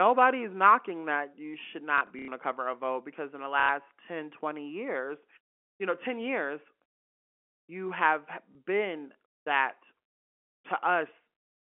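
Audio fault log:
1.98–2.28 s, 3.6–3.69 s, 8.52–8.55 s: packet loss with last packet repeated. After "knocking that you should", "because in the" and "you have", lost audio is filled by replaying the previous chunk. The 90 ms runs buzz near 33 Hz, which fits 30 ms packets.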